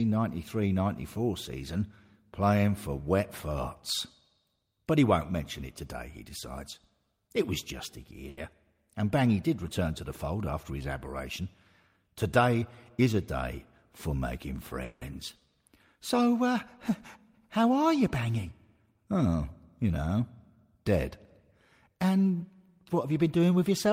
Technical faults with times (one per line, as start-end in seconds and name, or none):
8.29-8.39 short stall from a late packet
12.40-13.07 jitter buffer speed-up
14.83-15.03 call audio freeze